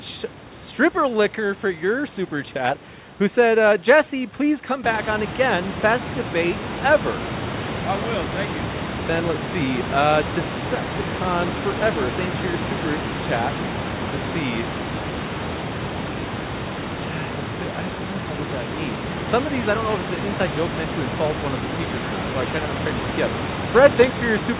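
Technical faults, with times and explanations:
No technical faults can be heard in this speech recording. The call path cuts everything above 4 kHz, which fits a G.711 telephone codec, and the room noise rises by about 15 dB at around 5 s, then sits roughly 9 dB below the speech.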